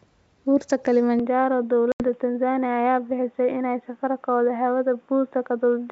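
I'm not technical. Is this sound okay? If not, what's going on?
No. From about 1.2 s to the end, the speech suddenly goes dull and boxy, as if the person had moved into a small cupboard. This is most likely an input switched to a poorer device, for example a headset taking over from a better microphone. Nothing above about 3.8 kHz gets through, so the crisp, airy part of the sound is gone. It also gets a little quieter, and a faint new background noise comes in with it. There is no gap at the change. That clean, instant switch with a lasting change of tone sets it apart from a dropout.

A second, separate problem is packet loss on an ADPCM call. From about 1.92 s to 2.03 s the sound cuts to total silence for roughly 80 ms, which fits about four lost packets of data. The sound then comes back slightly wrong, a little distorted, and settles within a fraction of a second. That short hole followed by a stumble is the difference from the device switch, which changes the tone for good.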